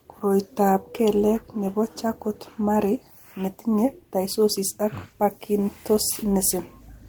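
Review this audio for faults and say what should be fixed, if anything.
Nothing stood out on listening to this speech, so there is nothing to fix.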